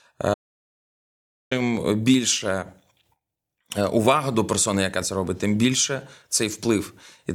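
At 0.34 s the speech cuts out abruptly and does not return until 1.51 s, an audio dropout to silence lasting about 1.17 s. The gap is silent with no room tone or noise floor, so the input was likely lost upstream, through a disconnected source, a broken link or a mute, while the recorder kept writing empty samples. The speech resumes mid-flow, and whatever was said during that stretch is gone.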